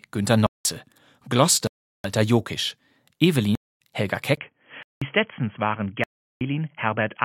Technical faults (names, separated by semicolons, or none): block of digital silence; input switched to a poorer device